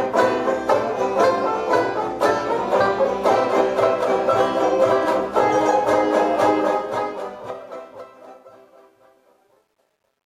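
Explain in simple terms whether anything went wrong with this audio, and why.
The fade-out, running from about 6.6 s to the end, was processed with too few bits and no dither. This is truncation distortion on a fade, making the tail gritty, worst from 8.27 s.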